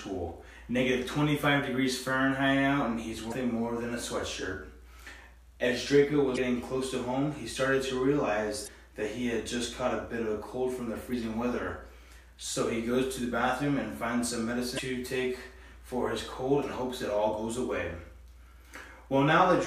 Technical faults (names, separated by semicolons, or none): damaged data in a compressed stream